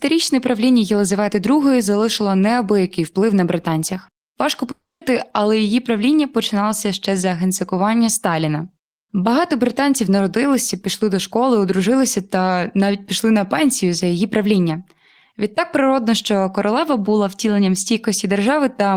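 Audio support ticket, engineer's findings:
Speech audio gap, 4.71–5.03 s. Last sound stretched into a fading buzz or hiss, then about 0.23 s of silence. Audio resumes at "але її правління починалося" with roughly 0.3 s of content gone. Likely cause: long network dropout, receiver concealment exhausted. Distinguishing: not a short packet loss (too long, concealment dies out into silence), not a mute or gate (fade-out buzz or hiss precedes the gap), and no time stretch: the missing section is simply skipped on resumption.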